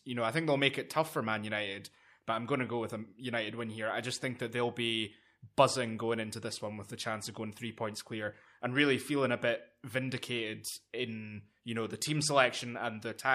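No faults detected anywhere in the recording.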